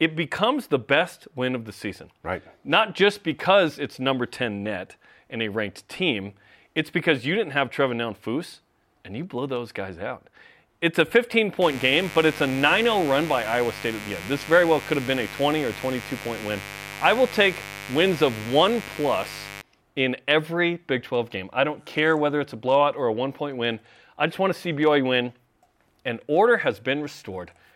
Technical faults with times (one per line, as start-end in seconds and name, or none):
11.61-19.61 mains buzz